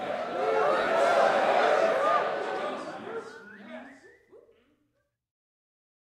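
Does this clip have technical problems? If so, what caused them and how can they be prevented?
Yes, there's one. Between about 0.81 and 0.88 s you get a short burst of lost LE Audio frames: roughly 52 ms of audio goes missing, scattered over a 60 ms stretch, with the longest single gap around 30 ms. The LC3 decoder covers each hole by replaying the last spectrum it had with randomised phase signs, so instead of a clean dropout you hear a brief noisy smear. The pattern fits about seven lost 7.5 ms frames. To prevent it, keep the Bluetooth link strong and free of interference (shorter distance, less 2.4 GHz congestion, or more retransmission headroom in the isochronous channel setup).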